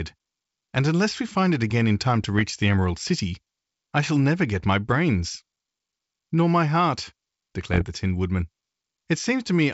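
Speech carried over a G.722 wideband link, where bit errors on the ADPCM link flip bits that also throw off the decoder's step size and predictor, so each hit keeps ringing for a moment. The result is rough, popping bursts with brief level jumps at 2.24 to 2.41 s, just after "it again in time", and at 7.63 to 7.85 s, after "my heart". The second burst is denser, pointing to a higher error rate, though both stay well under one percent.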